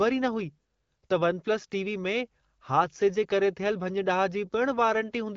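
No faults in the speech, which runs over an AMR wideband (HD Voice) link at 12.65 kbit/s with only light coding damage and nothing above 7 kHz, as expected for that codec.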